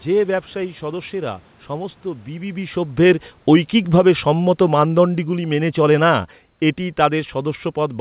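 From 3.04 s to 7.33 s the automatic gain falling is audible. The gain control judged the input too loud, or its background noise too strong, and pulled its gain down gradually, by about 7 dB in total. The level starts high and then sinks steadily, and the room noise sinks with it. That sets it apart from the talker's own movement near the microphone at around two and a half seconds. Throughout, the band stops at 4 kHz, consistent with a G.711 A-law call path.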